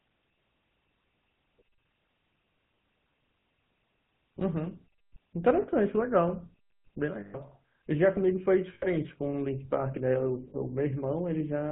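The speech passes through the GSM full-rate codec for its whole length, modelling the vocal tract and exciting it with sparse, regularly spaced pulses in a way that fits 13 kbps. Everything above 4 kHz is gone, and the voice carries a plainly audible buzzy, gravelly roughness.

Lost GSM frames occur at 3.4 s (40 ms), 5.62 s (60 ms), 7.2 s (140 ms), 8.74 s (80 ms) and 10.5 s (40 ms). Each gap is filled by repeating the last good frame, so the sound briefly freezes into a rough, metallic ring, longest at 7.2 s.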